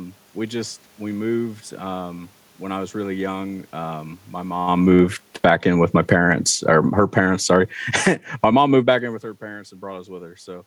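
From about 4.72 s to 9.63 s the automatic gain control is falling. It decides the input is too loud or its background noise too strong and pulls its gain down gradually, roughly 10 dB by the end. You can tell it's the gain and not the talker moving (the talker does move around 4.5 s and 9 s) because the room noise sinks right along with the speech instead of staying put underneath it.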